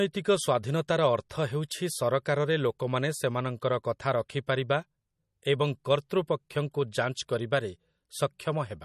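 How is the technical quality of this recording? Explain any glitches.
The recording has plainly audible codec damage for its whole length, likely from MP3 compression at a low bitrate, around 40 kbps. Nothing remains above 13 kHz. Short of bits, the encoder drops the treble and zeroes weak frequency lines frame by frame. The speech sounds dull, watery and swirly.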